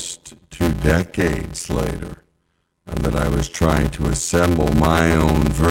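Throughout the speech there is a block size mismatch (padded). Each block arrives short and is filled out with silence. The gaps make an 86.1 Hz buzz, which fits a 512-sample block. Speech runs at 0.625 times speed, with its timbre kept.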